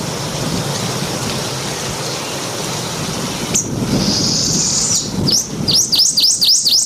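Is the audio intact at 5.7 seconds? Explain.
No. Gain pumping runs through the whole clip, including 5.7 seconds. The gain swings by around 10 dB, pulled down under each loud sound. This likely comes from gain set far too high, with a fast limiter clamping it down.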